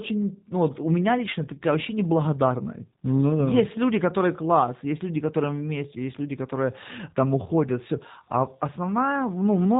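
G.729 codec damage runs throughout, from start to finish. The speech has been rebuilt by a low-bitrate voice codec, which fits the 8 kbit/s G.729A variant: a vocal tract filter, a pitch predictor and a handful of pulses per frame stand in for the original waveform. Nothing above 3.8 kHz survives, so sibilants sound dull and clipped, and the plainly audible coding leaves the voice rough, buzzy and faintly synthetic.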